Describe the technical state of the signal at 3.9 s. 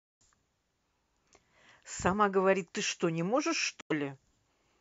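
A Bluetooth dropout spans 3.81 to 3.92 s, likely from late packets being discarded. The speech cuts to a sharp-edged blank gap in the waveform and spectrogram, then resumes mid-flow.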